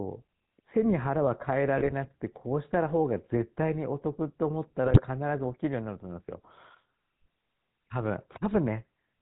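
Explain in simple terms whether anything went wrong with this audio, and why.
The whole recording has a buzzy, gravelly roughness with dull highs: that's the GSM full-rate codec, an early phone codec that keeps nothing above about 4 kHz. At 1.78 to 1.93 s and 4.86 to 5.01 s the speech briefly squawks and gargles. Those are GSM bit errors, where corrupted data scrambled the decoder for a moment.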